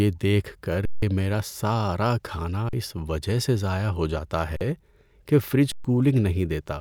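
At 0.85 to 1.02 s, 2.69 to 2.73 s, 4.57 to 4.61 s and 5.72 to 5.85 s the speech freezes in an underrun with held sample: the output buffer empties and the converter holds its last value, so the waveform goes flat and the sound stops without a click. The gaps last roughly 170, 43, 43 and 128 ms. About as much speech is lost each time.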